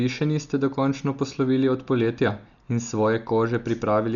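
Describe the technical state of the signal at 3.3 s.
At 3.3 s the speech sounds dull and cut off above 7.1 kHz, with rough, fluttering noise around tones. The likely cause is heavy Dolby Digital compression, present throughout and consistent with about 48 kbps, where empty frequency lines get dither noise.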